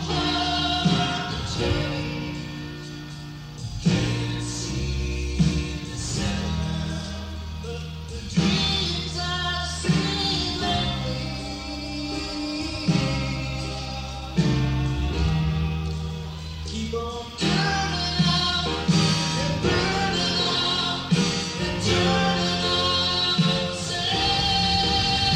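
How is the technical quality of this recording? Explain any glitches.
No glitches to explain: nothing in the recording registers as a technical fault to the ear.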